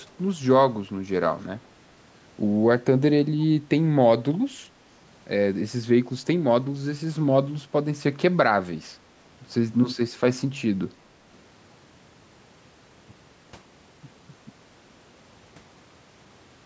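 From 0.00 to 0.04 s a very faint, delayed copy of the speech trails about 342 ms behind, a brief, quiet scrap. This is echo leak, likely from a loudspeaker on one side of the call whose echo canceller let part of the returning speech back into the call.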